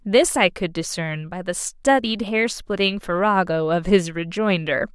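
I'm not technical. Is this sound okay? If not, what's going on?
Yes, it's fine; nothing in it sounds broken or glitchy, so there's nothing to worry about here.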